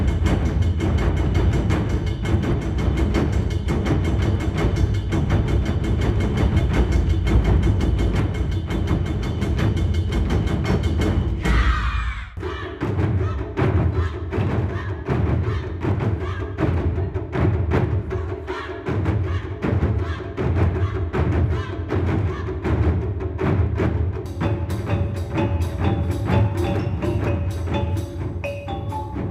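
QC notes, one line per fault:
No faults detected.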